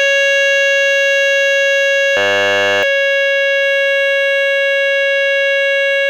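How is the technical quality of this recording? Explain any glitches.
The recording has one clear fault, a system hang loop from 2.17 to 2.83 s. A frozen system left the hardware replaying one 10 ms buffer, giving a steady 100 Hz buzz rather than silence or a dropout. Around 0.7 s of the music is lost.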